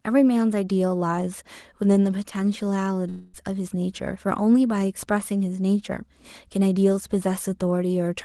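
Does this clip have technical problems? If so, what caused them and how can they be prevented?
Yes. From 3.09 to 3.36 s the speech turns into a smeared, buzzy continuation of the last sound that fades rather than stopping, and when the speech returns about 240 ms of it is simply gone. This is likely a long network dropout: no packets reached the receiver of this Opus call, whose top end stops near 12 kHz, so its concealment stretched the final sound across the gap. Prevention: use a steadier network link and enable forward error correction or redundancy.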